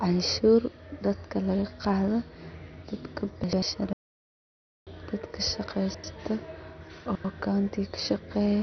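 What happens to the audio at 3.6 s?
Between 3.44 and 3.62 s the chunks play out of order: one roughly 93 ms block arrives a slot late, so the sound jumbles briefly. Throughout, including here, the audio is dull and gurgling, likely from heavy MP2 compression, which fits a low bitrate around 48 kbps.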